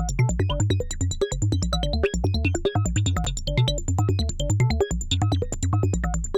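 At 3.24 s and 5.53 s the music has chunks out of order: a roughly 5 ms block plays one slot late, producing a brief jumbled moment at each point.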